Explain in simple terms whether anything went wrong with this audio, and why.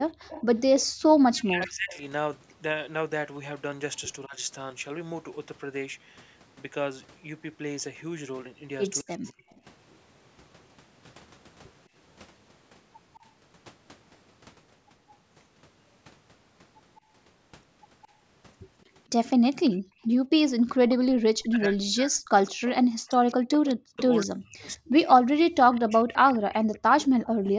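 Yes, three things went wrong. When both people talked at once, the echo canceller likely couldn't tell this talker from the loudspeaker's echo, so it turned everything down. The result is speech suppressed in double talk: the voice dips, dulls or drops out in pieces from 0.18 to 4.37 s, 9.02 to 9.44 s, and for much of 20.84 to 26.95 s.

Separately, an echo leak: one side was likely on a loudspeaker, and its canceller didn't remove everything its microphone heard. A faint copy of the voice comes back about a fifth of a second late, from 0.29 to 3.98 s, 9.26 to 9.6 s, 13.14 to 13.24 s, and 16.96 to 27.5 s.

Finally, the background was gated by the echo canceller. While the loudspeaker played, the canceller clamped the microphone down hard, so the room sound briefly vanishes at 1.0 to 1.17 s, 19.79 to 20.02 s and 27.23 to 27.45 s, then returns.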